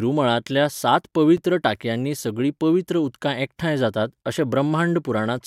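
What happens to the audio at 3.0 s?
Nothing goes wrong at 3.0 s; the speech plays through that moment intact, with no dropout, click or distortion.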